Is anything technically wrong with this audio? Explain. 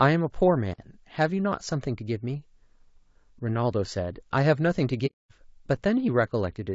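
Yes. Throughout the speech, the likely cause is low-delay AAC compression at a low bitrate, around 32 kbps. Its short frames resolve harmonics poorly, so the voice sounds rough and grainy with a thinned top band.

From 0.72 to 0.78 s an intermittent contact opens the line for about 47 ms, dropping the sound with crackle at both edges.

From 5.06 to 5.32 s, AAC frame loss with muting zeroes about 240 ms, consistent with roughly eight lost frames. It leaves a soft, fading hole.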